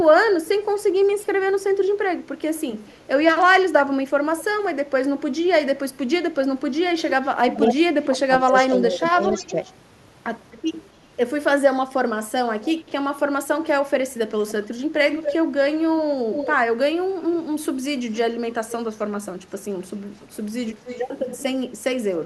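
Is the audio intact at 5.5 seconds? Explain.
Yes, the speech plays through 5.5 seconds without any dropout, click, distortion or other audible fault.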